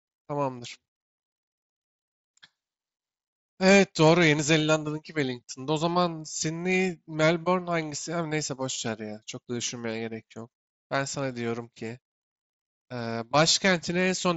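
No faults to report in this speech; the top end stopping near 8 kHz and the faint graininess on louder passages are just the mSBC wideband headset link doing its job.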